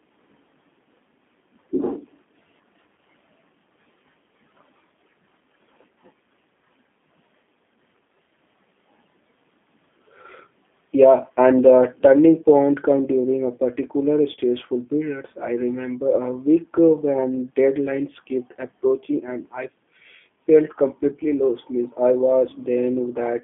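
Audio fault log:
throughout G.729 codec: the speech sounds rough and faintly synthetic, and is confined to a narrow telephone band of about 200 Hz to 3.5 kHz. This fits G.729A coding near 8 kbit/s, which rebuilds each 10 ms frame from a vocal tract filter, a pitch predictor and a few pulses, with no content above 4 kHz.
2.96 to 2.99 s VoIP packet loss concealed by the speech codec: a brief smeared stretch where the sound seems held and thinned for about 20 ms. The gap fits one lost packet. The decoder filled it by extrapolating from its last pitch and filter settings while lowering the gain, and since each frame builds on the previous one, the sound stays weak or distorted just after the gap.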